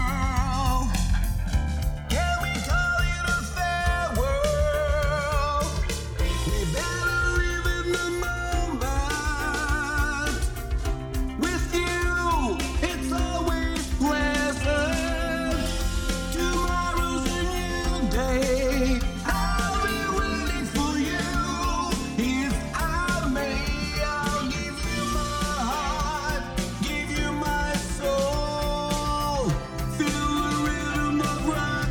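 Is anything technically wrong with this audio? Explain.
Yes, the two channels are drifting apart for the whole clip. They behave like two devices on separate clocks, off by something like 150 ppm, so the gap between them creeps up to about 7 ms. Fold it to mono and sliding comb notches give the sound a slow, swirling flange.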